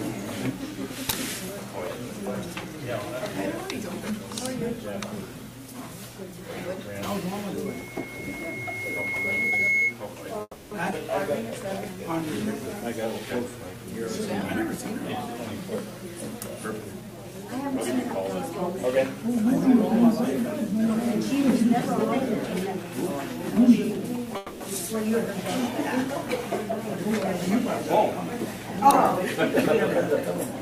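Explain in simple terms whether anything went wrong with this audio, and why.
Several things went wrong, all of them in how the sound reached the listener.

From 7.65 to 9.99 s there is a loudspeaker feedback squeal. A microphone picked up the loudspeaker it was feeding, and one pitch, about 2.2 kHz, kept looping and getting louder. It takes about two seconds to build from a faint whistle into a squeal that ends up somewhat louder than the sound itself, and it stops at 9.99 s.

At 10.41 s and again at 24.37 s there is a call audio freeze, lasting 0.3 s and 0.24 s. The sound stalls and the receiver stretches the last bit into a fading buzz, and the first one ends in a brief silence. The likely cause is data packets arriving late and the receiver running out of sound to play. Nothing is lost. The sound resumes where it stopped, just later.

At 10.91 s there is a skip ahead. Roughly a sixth of a second of sound is missing, and playback jumps straight past it with only a very short join. 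This happens when a chunk of sound is dropped while later sound is already waiting, so the two sides are spliced almost directly.

From 11.29 to 13.78 s there is a jitter buffer slow-down. The receiver's holding area was running low, so it repeated tiny slices of sound many times to build a reserve. Playback runs at about 97 percent speed, adding 87 ms in total. The pitch stays the same, but the sound is slightly drawn out.

There are four stretches of jitter buffer speed-up: 13.85 to 14.78 s, 16.79 to 17.74 s, 22.76 to 24.27 s, and 26.71 to 30.55 s. The receiver had too much sound queued, so it trimmed tiny slices to catch up. Three of these run about 3 percent fast. The one at 16.79 s runs about 9 percent fast and sounds noticeably hurried. The pitch is unchanged in all four.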